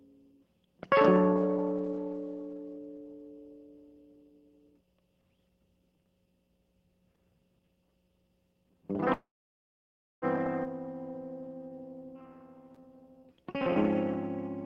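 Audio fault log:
9.13–10.25 s, call audio freeze: the music halts, the last sound is carried on briefly, then about 0.96 s of silence follows, 1.1 s in all. It resumes exactly where it stopped with nothing lost, unlike a skip. This likely means delayed packets emptied the jitter buffer.
10.64–10.68 s, skip ahead: playback jumps forward almost seamlessly, with only an 8 ms join. Around 0.7 s of music is simply gone. A stretch was dropped while later audio was already queued, so unlike a freeze there is no pause, just a missing section.
11.11–12.18 s and 12.81–13.68 s, jitter buffer slow-down: the music drags to 88% and then 90% speed, adding 134 ms and 91 ms, yet pitch stays put. Repeated single pitch periods rebuild the buffer's reserve, stretching sounds rather than stopping or cutting them.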